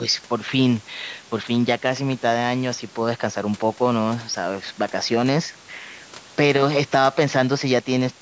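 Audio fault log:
Nothing stood out on listening to this speech recording.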